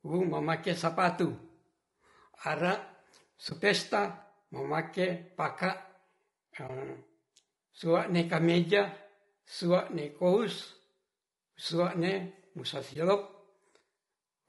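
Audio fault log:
Throughout: low-delay AAC compression. The speech is rough and grainy, with a hiss-like fill between the pitch harmonics and a thin, somewhat synthetic upper band. The likely cause is a low-delay coder such as AAC-ELD, whose short frames resolve harmonics poorly and spend bits fast. The degree of damage fits a rate around 32 kbps. Unlike ordinary broadband noise, the graininess rides on the speech itself and vanishes in the gaps.
3.49–3.52 s, 6.67–6.70 s, 12.93–12.96 s: AAC frame loss with muting. At each point about 20 ms of speech is missing. The decoder zeroed one lost frame, and the overlapping transform windows taper the sound down and back up around the hole, so the dropout is a brief, soft-edged dip. That smooth fade distinguishes it from a hard sample dropout, which leaves a sharp step. It also differs from concealment by repetition, which would leave a buzzy echo.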